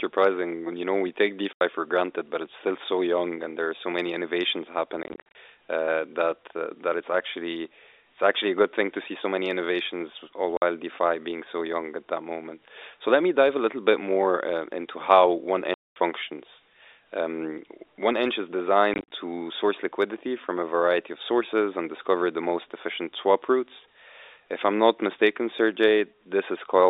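Packet loss filled with silence cuts the speech at 1.53–1.61 s (after "we take"), 5.03–5.35 s (scattered gaps), 10.57–10.62 s (after "so many innovations all"), 15.74–15.96 s and 18.94–19.12 s (after "one inch is"). Lost packets were replaced by silence, leaving gaps in multiples of 10 ms, which fits 10 ms packets. Each gap has hard edges. On the waveform these appear as flat silent stretches, and on the spectrogram as blank vertical bars with sharp edges. All of this sits inside the narrow 300–3700 Hz G.711 telephone band.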